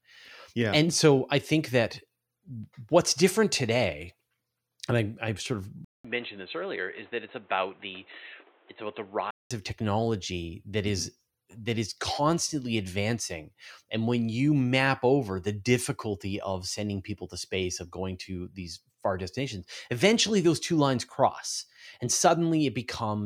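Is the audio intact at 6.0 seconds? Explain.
No. From 5.85 to 9.51 s, after "sort of", the speech turns dull and boxy, with nothing above 4 kHz. It drops somewhat in level, with new noise well below it. A 200 ms silence marks the switch. The likely cause is the input switching to a poorer device. Clarity returns at "of technology that is".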